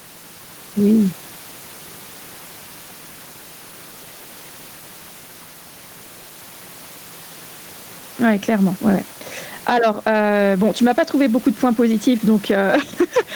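Gain pumping runs through the whole clip. The room noise, about 31 dB below the speech, swells in each pause and ducks by around ten decibels under loud syllables. The likely cause is excessive microphone gain with a fast limiter squashing every peak.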